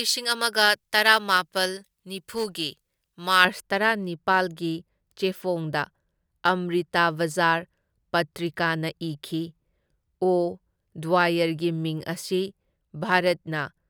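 From the start to 3.45 s, the speech has pre-emphasis left on. The treble was lifted for recording or transmission and the matching cut was never applied, so high frequencies stand about 11 dB above 1 kHz by 10 kHz, in a rising shape that fits the J.17 curve. The result is thin, glassy and sibilant. The lift grows with frequency and ends at 3.45 s.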